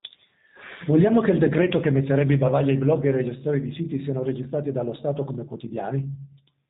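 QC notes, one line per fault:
throughout G.729 codec: the speech passed through a low-rate model-based coder, consistent with 8 kbit/s G.729A, which resynthesises each 10 ms frame from a filter, pitch estimate and sparse pulses, so everything above 4 kHz is gone and the voice sounds dull, buzzy and plainly synthetic.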